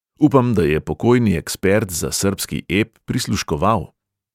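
No technical faults turn up anywhere in the recording; the signal stays continuous and steady throughout, with nothing that points to a problem in capture, processing or playback.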